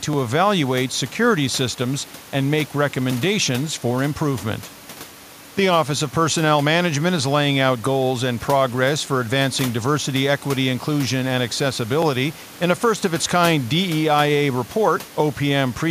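A speech recording with a click roughly every 2.97 s from 0.13 s to 14.99 s, about seven in all, likely clock drift buffer slips from two devices mismatched by roughly 300 ppm, each dropping or repeating a few dozen samples. The room noise sits about 22 dB below the speech.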